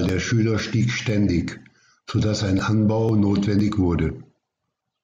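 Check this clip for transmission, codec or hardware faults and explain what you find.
There's one fault: periodic USB or driver dropouts, from 0.09 s to 4.59 s. About every 0.5 s, roughly a millisecond of speech gets skipped as the bus stalls, leaving regular ticks.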